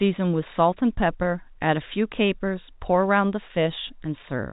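No technical faults can be heard in the speech, which carries the expected narrowband telephone character of G.711 A-law coding at 64 kbps, with nothing above 4 kHz.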